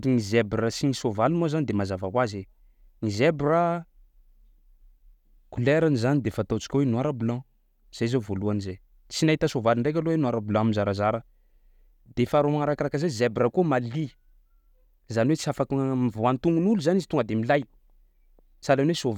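No technical faults can be heard in this recording.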